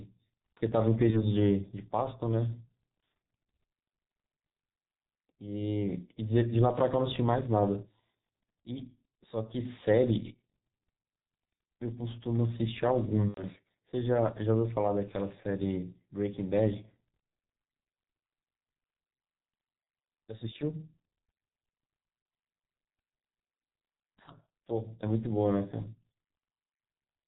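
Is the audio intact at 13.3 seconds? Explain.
No. From 13.28 to 13.44 s there is VoIP packet loss concealed by the speech codec. About 90 ms of audio went missing, which fits three lost 30 ms frames. The decoder filled the gap by repeating its last pitch and filter at falling gain. The speech smears into a fading buzzy tone or coloured noise and stays weak for a moment after.

The G.723.1 codec also runs through the whole clip at 6.3 kbit/s, with heavy damage. Nothing above 4 kHz survives, and its voice model updates slowly. The speech at 13.3 s sounds muffled and hoarse, with blurred consonants.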